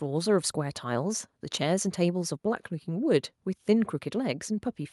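Listening to this speech recording, nothing stood out as a technical problem.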